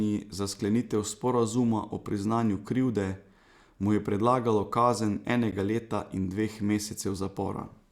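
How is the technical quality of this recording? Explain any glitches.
The speech has one brief glitch: a gap between stream segments at 5.51 s. It sounds like a tiny, hard-edged dropout, roughly 10 ms of dead silence that cuts in and out abruptly. The cause is a timing mismatch where one streamed segment ends and the next begins, consistent with a boundary between 6-second segments. Their time stamps leave a small hole, and the player fills it with silence instead of sound. No audio is lost; the stream is just pushed about 10 ms later.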